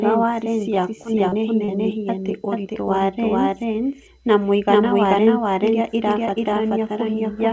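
Throughout the speech, a doubled audio track is audible: a second full-band copy trails the original by roughly 400 ms at about the same level. Each phrase is followed by an exact, dry repeat with no room colour. The likely cause is a second, slower capture path mixed in alongside the direct one, holding both copies out of step.

From 0.75 to 1.71 s there is repeated packet loss, which gives a choppy quality. Several short holes follow one another, the longest about 32 ms. Each is patched by stretching the preceding sound, so fragments go missing. The audio arrives through a call codec with nothing above 8 kHz, which fits G.722 at 64 kbps.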